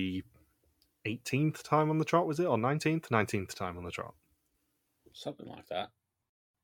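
A short speech recording with no technical faults to report. Nothing in the audio calls for a time stamp or a cause.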